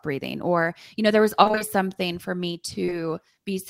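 Right after "you know there was", from 1.43 to 1.62 s, the speech turns choppy and robotic: this is repeated packet loss. Several gaps land in quick succession, none longer than about 20 ms, and each is patched by stretching the preceding sound, so nearly half of that stretch is synthetic fill. Because the holes keep recurring, with the next following soon after the last, this produces a sustained choppy, stuttering texture rather than a single blip.

Just after "for me", at 2.85 to 2.89 s and again at 2.90 to 2.93 s, there are two back-to-back instances of short concealed packet loss. Each drops roughly 20 ms of audio, which the receiver bridges by extending the last sound before blending back into the real signal. These are heard as a brief smear or wobble. Unlike the earlier stretch, only two isolated holes occur, so the disturbance is momentary and never builds into a robotic character.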